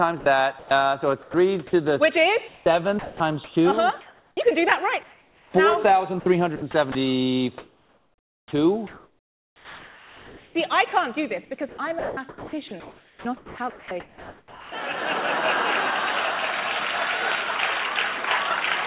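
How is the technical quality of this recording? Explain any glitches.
The quality is poor, because the sound keeps dropping out in patches. It all sits in a narrow telephone band with nothing above 4 kHz, which fits a G.711 call path.

Sound chopped by the voice detector occurs six times: 0.2–0.71 s, 1.22–1.73 s, 2.48–4.37 s, 6.2–6.95 s, 7.58–10.55 s and 11.69–14.72 s. The likely cause is a sender-side voice detector toggling transmission on and off. Quiet portions were judged silent and swapped for comfort noise, about 0.18 s each in the first two stretches, 0.87 s in the third, 0.15 s in the fourth, 2.61 s in the fifth and 2.13 s in the last. The result is choppy.

Comfort noise in place of the background appears at 5.03–5.54 s. The sender likely stopped transmitting during a pause. The receiver then filled the gap with generated noise shaped roughly like the room. The real background sits about 34 dB below the loud parts. 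The fill replaces it with a flat, featureless hiss about 2 dB quieter. For half a second the ambience turns smooth and slightly dimmer, then the true texture returns.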